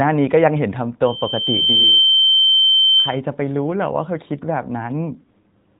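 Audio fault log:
1.05–3.20 s, loudspeaker feedback squeal: a single tone near 3.1 kHz swells over roughly a second to about 10 dB above the speech as the microphone re-amplifies its own loudspeaker. Unlike steady hum or a test tone, it grows from nothing.
4.90–5.79 s, AMR rate drop: the AMR-NB stream falls from 12.2 to 5.9 kbps, so the voice turns rougher and more synthetic with fewer bits per frame. Unlike a dropout or band cut, there is no gap and the 4 kHz ceiling stays put.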